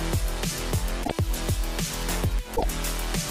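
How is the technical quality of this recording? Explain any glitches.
Two brief glitches break the recording, both from damaged data in a compressed stream. At 1.01 to 1.12 s and again at 2.52 to 2.64 s, corrupted bytes in the encoded file left the decoder unable to read those frames correctly, so it lost sync and had to hunt for the next valid frame header. Each spell lasts about a tenth of a second and is heard as a chirp, squawk, click or short hole in the sound.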